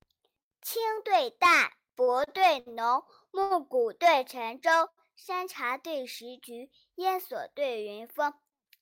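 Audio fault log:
2.03 to 2.23 s, 2.24 to 2.29 s, 2.59 to 2.68 s, 3.42 to 3.52 s and 4.89 to 4.99 s: short stalls from a late packet. Each time, the next packet had not arrived when it was due, so the jitter buffer ran dry and the receiver stretched the last sound to fill the gap, for 40, 30, 70, 82 and 85 ms. Playback then resumed at the same point, so no speech is lost. What you hear is a syllable held slightly too long, with a faint buzz or dip, and the output falls a little further behind each time.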